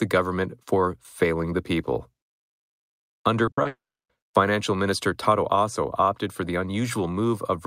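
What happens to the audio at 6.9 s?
Nothing goes wrong at 6.9 s; the speech there is intact, with no dropout, click, distortion or other fault.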